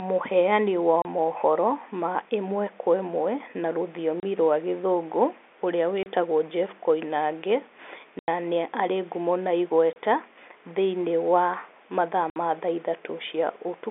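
Packet loss filled with silence punches holes in the speech at 1.02, 4.20, 6.03 (after "rwa gĩthũngũ ũrĩa"), 8.19 to 8.28 (before "ni arĩ ngumo na"), 9.93 (after "ni arĩ ngumo na") and 12.30 s. Gaps of 30, 60 and 90 ms fit dropped 30 ms packets replaced by silence, with abrupt edges within the band-limited telephone sound.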